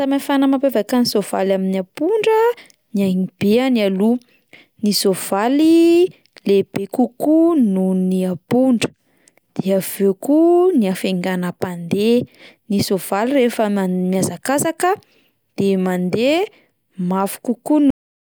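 At 17.90 s the speech stops abruptly in the middle of a sound, with no fade or natural decay, and the final third of a second up to the end is flat digital silence. This is a cut-off end: the last buffers of audio were never written out or played back, so the recording ends wherever the data ran out rather than where the speaker finished.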